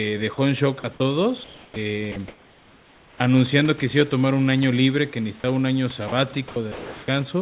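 At 0.34 to 0.38 s and again at 0.80 to 0.84 s, brief bits of speech vanish into a flat hiss for about 40 ms each. This is sound dropped by the voice detector: the sender likely judged quiet speech to be background, stopped sending, and the receiver filled the gap with comfort noise.

From 1.44 to 1.76 s the room's textured background turns into a smooth, featureless hiss about 7 dB quieter. That points to comfort noise in place of the background, likely from discontinuous transmission swapping the real room sound for synthetic noise during the pause.

That stretch ends with the next word starting abruptly at 1.76 s, its first 70 ms or so missing from 1.69 s. This onset, clipped by the voice detector, likely happened because the detector was slow to notice that speech had resumed, so the soft beginning was never sent.

Between 2.12 and 3.20 s the speech turns choppy, with syllable edges repeatedly swallowed. 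That is sound chopped by the voice detector, likely switching on and off several times and replacing nearly a second of audio with comfort noise.

Two more short dropouts follow, at 5.40 to 5.44 s and 6.08 to 6.12 s, each giving up about 40 ms to hiss. From 6.48 to 7.08 s the same choppy pattern returns, with roughly 0.44 s of the speech replaced.

Throughout, the speech has nothing above 4 kHz, which fits a narrowband call codec, and faint room noise sits about 28 dB below the speech.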